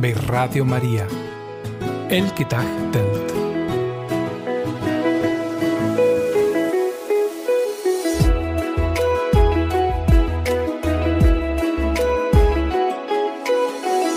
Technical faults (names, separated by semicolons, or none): none